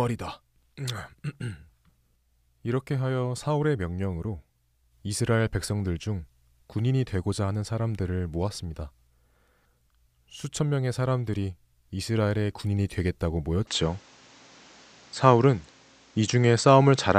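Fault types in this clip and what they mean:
Input switched to a poorer device: Partway through, the recording system likely changed its input to a lesser microphone or a headset's call profile, and the speech from 13.67 s to the end comes through that device. Nothing above 8.1 kHz survives, so the speech turns duller and boxier at once. The change happens without a gap, and brings a modest level shift and a faint new noise floor sitting well below the speech.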